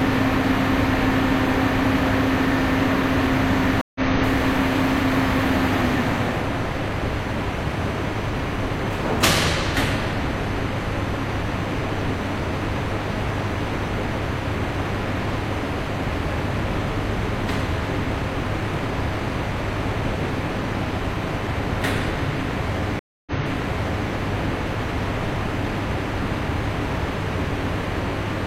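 At 3.81 s the sound drops out for about 0.14 s, then resumes roughly 150 ms further on; at 22.99 s a 0.27 s gap is followed by audio jumping back 836 ms. Both are stream reconnects: the link broke and a fresh decoder restarted mid-stream.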